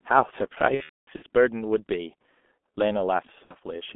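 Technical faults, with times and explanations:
Throughout: G.723.1 codec. The audio is confined to roughly 200 Hz to 3.5 kHz and is heavily damaged: muffled, hoarse, with smeared consonants. The low bitrate, which fits about 6 kbit/s, and 30 ms frames leave the slowly updated voice model trailing rapid changes.
0.74 to 1.23 s and 3.45 to 3.55 s: VoIP packet loss concealed by the speech codec. In the first stretch about 360 ms is missing, scattered over 480 ms with a longest gap of 240 ms. The second is a 60 ms gap. The decoder repeats its last pitch and filter at falling gain, giving a fading buzzy tone or coloured noise, and the speech stays weak briefly afterwards.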